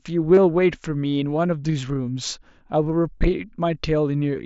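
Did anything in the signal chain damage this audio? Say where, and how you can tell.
Yes. At 0.35 to 0.37 s and again at 3.18 to 3.21 s, the speech turns briefly into a buzzy held tone with a slight warble as it resumes. This is concealed Bluetooth headset packet loss on the wireless link: roughly 30 ms of mSBC audio went missing, which fits a run of a few frames, and the receiver filled each gap by repeating recent waveform.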